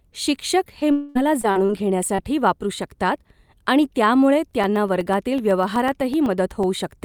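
Short concealed packet loss first appears at 0.79 s: about 20 ms of the stream arrived too late to decode, and the receiver bridged the hole by extending the preceding sound before blending back into real audio. It comes through as a brief smear. The same fault recurs at 1.41 s (about 20 ms), 1.51 s and 1.65 s (about 40 ms each) and 2.15 s (about 40 ms), each a short smear or wobble where a consonant may thin out or vanish.

Between 0.91 and 1.17 s, a long network dropout takes out about 240 ms. The cause is likely a stall in which no packets arrived. The receiver filled almost the whole gap by continuing the last sound, so instead of silence there is a fading buzz or hiss of roughly a quarter second. Speech then resumes further along, with that stretch missing.

Periodic USB or driver dropouts begin at 4.51 s, just after "आणि त्यामुळे", and run until 6.89 s. Every 0.125 s, something blocks the audio path and roughly a millisecond of signal is replaced by silence, about twenty times in all. 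The result is a steady rhythm of ticks at eight per second, audible wherever speech is present.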